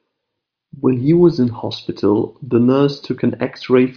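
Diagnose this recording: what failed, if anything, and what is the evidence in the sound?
Nothing failed; no audible fault.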